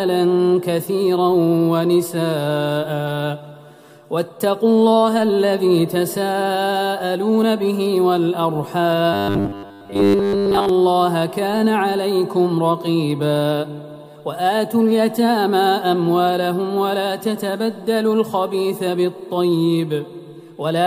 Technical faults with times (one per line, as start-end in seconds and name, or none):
9.13-10.69 robotic sound from repeated short buffers